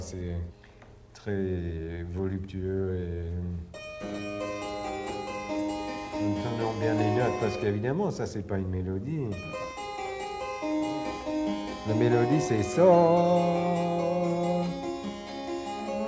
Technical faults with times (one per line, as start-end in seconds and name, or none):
none